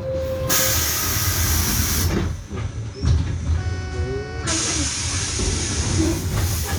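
At 2.23 s the digital radio blends to analogue FM over 0.43 s, holding until 6.42 s. With the digital signal lost, faint hiss rises roughly 40 dB down. Level stays unchanged, unlike a dropout or fade.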